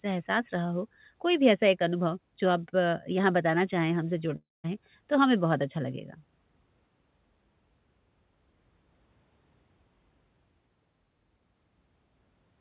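Speech, heard through a narrowband call path with nothing above 4 kHz, which fits G.711 mu-law at 64 kbps, carries one fault. A long network dropout, likely, starved the receiver from 4.36 to 4.67 s: the last sound is stretched into a fading buzz or hiss, then silence, and about 280 ms of audio never returns.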